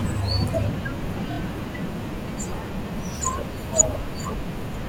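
At 1.29 to 1.38 s the speech stutters from repeated frames. One compressed block of 26.1 ms, which fits a single codec frame, plays three extra times and adds 78 ms. Unlike a dropout, nothing is lost: the same sliver simply recurs in a quick rhythm.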